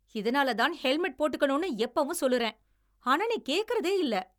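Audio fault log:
No fault found in this speech clip.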